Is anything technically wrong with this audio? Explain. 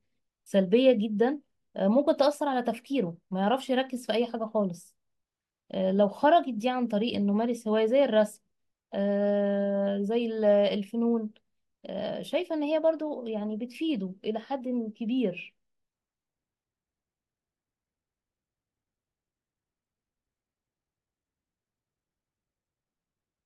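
Yes. At 14.75 s the speech carries a single sharp click, consistent with dropped samples. The cause is likely a gap in the sample stream where roughly one sample, a tiny fraction of a millisecond, went missing, so the waveform steps abruptly from one value to a later one. That discontinuity is far too brief to remove any audible sound. It is heard as one isolated tick and shows as a thin vertical line across the spectrum.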